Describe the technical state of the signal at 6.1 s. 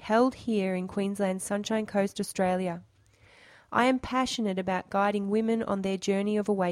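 At 6.1 s the signal is intact, with no dropout, distortion, clipping or other fault to be heard.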